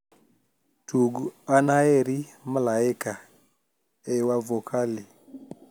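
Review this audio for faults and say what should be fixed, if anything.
Nothing to fix: no faults found in this speech recording, so no corrective or preventive action is needed.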